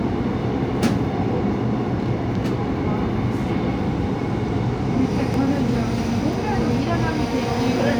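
A recording of sounds with two brief jumps, at 5.34 s and 6.33 s, where the sound jumps forward slightly with no gap. Each skip loses only a few milliseconds, and the likely cause is a dropped buffer (overrun), with the audio joined straight across the missing piece.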